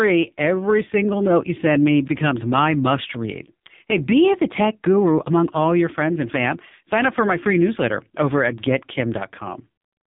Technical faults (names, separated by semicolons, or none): AMR narrowband mobile codec